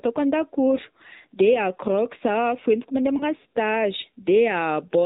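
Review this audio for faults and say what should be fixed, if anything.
The speech has AMR narrowband mobile codec damage throughout, and it is plainly audible. Nothing above 4 kHz survives, and the voice has a buzzy, synthetic edge because the codec rebuilds it from a vocal tract model and a few pulses per subframe. The degree of buzz fits a low rate of about 7.4 kbps. Simple telephone-band filtering would make the sound dull but still natural, whereas here the texture itself sounds manufactured. To prevent it, record or route the audio over a wideband or uncompressed path, or use a higher AMR mode.

There is a lost AMR speech frame from 3.18 to 3.26 s, just after "a fihentiko mande". When the frame fails, the decoder carries the previous pitch and vocal tract settings forward at reduced gain, and this produces a brief dip or warble before the voice recovers a little rough. The disturbance fits a single missing 20 ms frame. 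Unlike a network packet dropout, there is no hard silence or click, only a smeared, concealed patch. Stronger radio signal or error protection on the link would prevent it.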